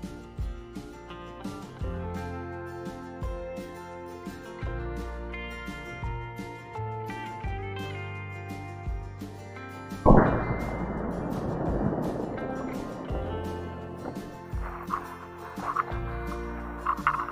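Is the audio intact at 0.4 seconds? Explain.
Yes, the audio is intact at 0.4 seconds, with no dropout, click, distortion or other fault at that moment.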